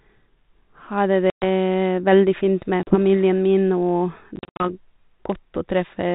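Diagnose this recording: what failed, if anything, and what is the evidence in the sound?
Network stage: packet loss on an ADPCM call. Hard-edged silences cut the speech at 1.30–1.44 s, 2.83–2.98 s and 4.36–4.70 s. The last is scattered gaps up to 70 ms. The decoder's adaptive state then mismatches the sender's. Speech resumes slightly distorted, then settles.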